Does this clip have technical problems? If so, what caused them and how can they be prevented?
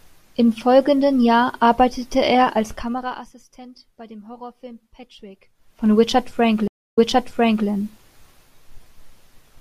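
Yes. Zipper noise ticks from 2.65 to 3.36 s as the level drops about 20 dB in 2 dB steps, roughly twenty per second. It returns from 5.52 to 5.87 s as the level climbs back, roughly forty steps per second. Each unsmoothed step clicks. Ramping the gain smoothly, sample by sample, prevents this.

A stream reconnect follows at 6.68 s. The connection dropped, leaving 0.27 s of silence. A fresh decoder then resumed 0.73 s earlier, repeating that stretch. A larger playback buffer and a more stable connection would prevent it.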